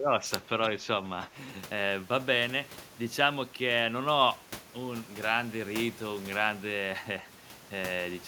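From 0 to 0.22 s the speech dips by about 15 dB, shrinking the waveform, likely speech suppressed in double talk by an echo canceller.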